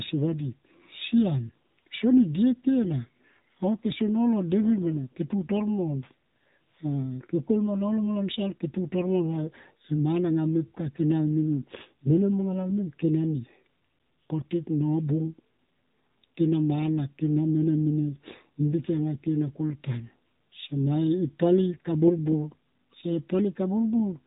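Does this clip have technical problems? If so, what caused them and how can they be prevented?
Yes. Throughout the speech, the sound is narrow and boxy, with a buzzy, synthetic edge and nothing above about 3.8 kHz. The damage is plainly audible. This is the AMR narrowband mobile codec (AMR-NB). It samples at 8 kHz and rebuilds the voice from a vocal-tract model excited by a handful of pulses per 5 ms subframe. The degree of buzziness points to one of its lower modes, around 7.4 kbps. To prevent it, capture or route the call over a wideband path such as AMR-WB, or record locally instead of through the mobile network.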